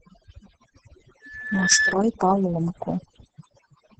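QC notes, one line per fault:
throughout: overdone noise removal. The background drops and breaks up into twinkling specks. The reduction is set so hard that individual frequency bands close to the noise floor are pulled down or cut out, and the quieter parts of the speech disappear with them.
throughout: Opus voice compression. The speech is muffled, hoarse and slightly robotic, and nothing is present above about 8.9 kHz. The sound points to the SILK voice coder running in wideband mode at a low bitrate of around 10 kbps, where the excitation is coded coarsely and the top end is discarded.
1.21–1.96 s: loudspeaker feedback squeal. A single tone at 1.7 kHz swells over roughly half a second into a squeal sitting around 5 dB above the speech. The microphone is picking up its own loudspeaker, and the loop gain exceeds one at that frequency, so the tone keeps building until the amplifier limits it or the loop is broken.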